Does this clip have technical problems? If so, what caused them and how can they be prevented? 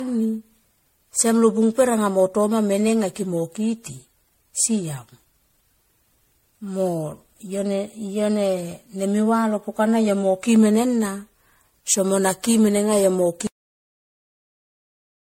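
Yes. Throughout the speech, the sound is swirly, smeared and hollow, with blurred attacks and nothing above 16.5 kHz. This is likely generation loss from around ten rounds of MP3 encoding, which fits a chain near 64 kbit/s. Each pass requantises on a shifted frame grid, so noise and spectral holes pile up. A single low-bitrate encode would sound thinner but not this compounded and watery. To prevent it, keep a lossless master and encode to MP3 only once, at the final step.

At 13.47 s the audio has a cut-off end. The speech stops mid-sound and drops straight to digital silence with no decay, because the final buffers were never written or played. A deliberate ending or fade would taper off, but this cut is abrupt and the silence continues to the end of the file. To prevent it, flush and close the recording or export properly so the last buffers are written.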